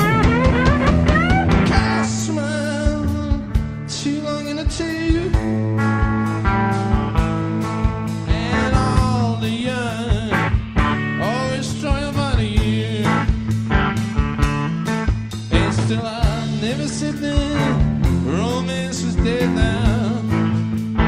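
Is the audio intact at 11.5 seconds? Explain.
Yes, the audio is intact at 11.5 seconds, with no dropout, click, distortion or other fault at that point.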